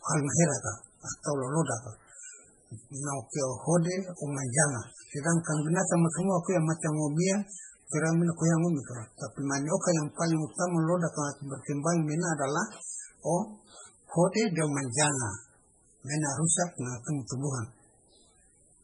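Speech runs through the whole clip with heavy MP3 compression damage from start to finish. The speech has a watery, swirling quality. Sibilants come out metallic and chirpy, and attacks sound smeared. Nothing is present above 10.5 kHz. The likely cause is an encoder starved of bits, which fits a rate near 16 kbps. Weak frequency lines get zeroed and flicker on and off between frames, and the treble is cut at a fixed point.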